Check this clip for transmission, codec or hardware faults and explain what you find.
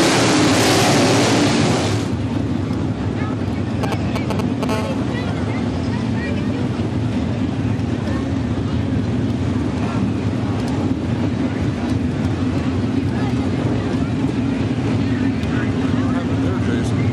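A nearby 2G phone interfered with the audio hardware in two stages. From 3.83 to 4.65 s there are GSM signalling bursts: the handset was exchanging short radio bursts with the network, and the audio circuitry rectified them into a galloping dit-dit-dit of brief 217 Hz buzzes, roughly as loud as the wanted sound.

From 4.69 to 6.97 s the phone was in a call and transmitting continuously at its 217 Hz burst rate, producing GSM phone buzz. The rectified pulses give a hard, raspy buzz at 217 Hz, rich in harmonics and unrelated to the audio, sitting about 15 dB below the signal and nearly steady.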